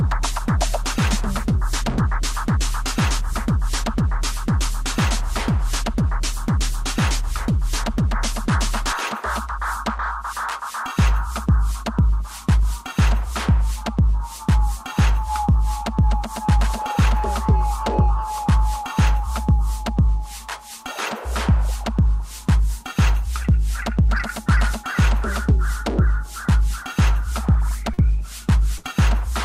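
At 27.93 to 28.00 s there is a short concealed packet loss: about 40 ms of audio arrived too late, and the receiver extended the preceding sound for roughly 42 ms before blending back. It is heard as a brief smear or wobble.

At 28.78 to 28.85 s a burst of packet loss is longer. About 60 ms went missing, and the receiver stretched the last sound for around 57 ms while fading it, giving a held, dwindling buzz or hiss. The audio then resumes further on with a gap.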